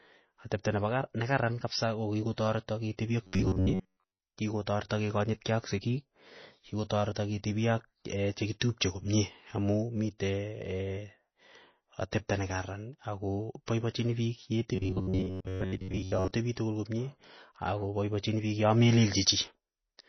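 Throughout the speech, plainly audible MP3 compression damage is present. The sound has a watery, swirling texture as weak frequency components drop in and out from frame to frame. Consonant edges are smeared and sibilants carry a metallic chirp. The degree of damage points to the encoder running short of bits, likely at a low bitrate around 24 kbps.

From 3.23 to 4.20 s, and again from 14.75 to 16.31 s, the speech turns into a rigid, metallic buzz at 93.8 Hz that still roughly tracks the syllables. This robotic sound from repeated short buffers is likely caused by audio arriving too seldom, with the software looping the last short chunk while most of the real signal is skipped. The buzz frequency fits a repeated chunk of about 10.7 ms.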